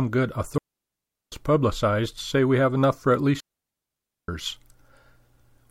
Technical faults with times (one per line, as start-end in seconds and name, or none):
0.58-1.32 digital wireless dropout
3.40-4.28 digital wireless dropout